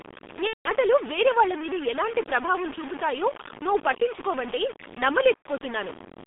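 From start to finish the speech is coated in a coarse grain that moves with the voice, and quiet tails break up and sputter. The grit sits only about 10 dB below the speech. Unlike steady hiss or dithered noise, the error follows the signal, so it is likely low bit depth without dither, with the waveform truncated to very few levels, which fits 4-bit quantisation.

Also throughout is the G.723.1 codec. The line is confined to roughly 200 Hz to 3.6 kHz, so nothing reaches the upper bands, and the voice is muffled and hoarse with smeared consonants. Heavy coding damage, consistent with a low-rate codec near 6.3 kbit/s, gives a slow, blurred quality that differs from the quantisation grain. It is a spectral and temporal dulling, not a level-dependent roughness.

From 0.47 to 0.71 s, just before "వేరే వాళ్ళ మీద ఎలాంటి", there is VoIP packet loss concealed by the speech codec. About 180 ms of audio went missing, which fits six lost 30 ms frames. 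The decoder kept extending the last pitch and filter while lowering the gain, so the sound is briefly stretched and fades, then mutes from the third lost frame on, rather than clicking as a plain dropout would. The voice stays weak for a moment after it resumes.

A shorter concealment follows at 5.36 to 5.47 s. It covers about 90 ms, which fits three lost frames, and the concealed sound fades out before the speech recovers.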